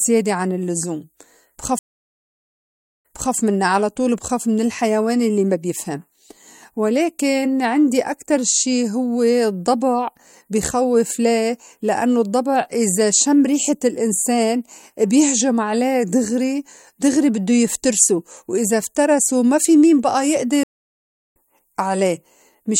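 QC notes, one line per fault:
1.79–3.35 s, stream reconnect: the connection dropped, leaving 1.25 s of silence, then a fresh decoder resumed 0.31 s earlier, repeating speech before "منّا على طول بخاف".
20.63–21.36 s, stream reconnect: after "ما في مين بأى" the link broke for 0.72 s of silence, and playback rejoined the live stream roughly 0.7 s further on, skipping that stretch.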